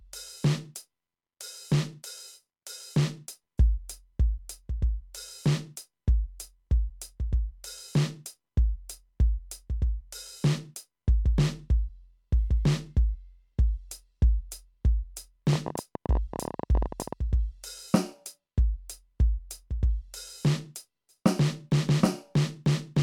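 From 15.53 to 17.14 s the music is overlaid by a train of clicks: roughly thirty sharp, near-identical pulses at about 19.4 per second, spaced unevenly, and peaking around 10 dB above the music itself. The likely cause is interference or a faulty connection or power supply injecting pulses. Unlike crackle, which is random in shape and level, these clicks repeat the same form, and unlike a single dropout they arrive as a sustained ticking burst lasting about 1.6 s.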